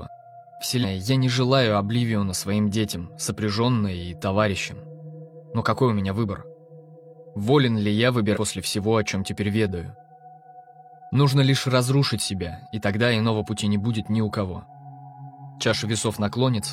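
The audio has compressed frames skipped twice, at 0.79 to 0.85 s and 8.32 to 8.37 s. Each time, about 200 ms of material vanishes. The jump fits a few dropped frames of roughly 46 ms.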